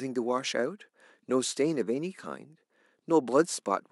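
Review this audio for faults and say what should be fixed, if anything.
Nothing needs fixing; no faults can be heard.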